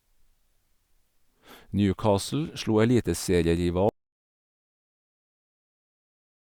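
An audio dropout to silence hits this speech recording at 3.89 s and runs to the end, cutting the speech off mid-flow into silence with no room tone. The input was likely lost while recording continued, writing silence.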